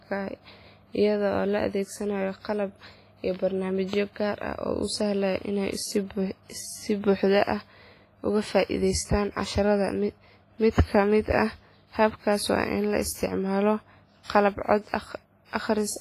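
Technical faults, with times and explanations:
throughout: WMA compression. The speech has a ringing, washy quality, with a hiss that swells and fades along with the voice and heavy smearing of detail, and nothing is present above 15.4 kHz. This is likely the work of a transform codec such as Windows Media Audio running at a low bitrate, consistent with something near 24 kbps. Its quantisation noise spreads across long blocks, and weak spectral lines are discarded outright, which leaves the thin, swirling texture.
10.70–10.76 s: pre-echo. A brief hiss of about 59 ms creeps in just ahead of a sharp onset, and the attack itself lands softened and smeared. The codec spreads its quantisation noise evenly across a whole transform block. Because this onset falls late in its block, noise scaled to the loud attack also fills the quieter moment before it, where nothing masks it. That makes the noise audible as a short leading wash.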